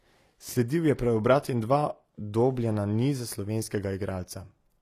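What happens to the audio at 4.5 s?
At 4.5 s the speech carries plainly audible damage that runs through the whole clip, likely HE-AAC compression at around 24 kbps. The treble is rebuilt from copied lower bands, so on a spectrogram the upper band shows repeated, misaligned harmonic patterns above a crossover.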